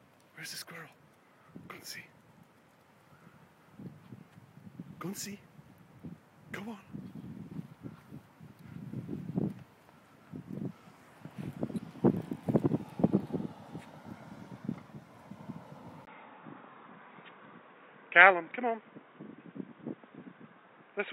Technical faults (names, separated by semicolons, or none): input switched to a poorer device